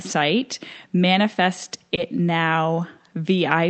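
At 1.95 to 1.99 s there is a short concealed packet loss. About 20 ms of the speech arrived too late for the decoder, and the receiver patched the gap by extending the preceding sound. It then blended back into the real signal. The result is a brief smear in the speech, a small wobble rather than a clean gap. The call path's Opus coding limits the audio to 8 kHz throughout.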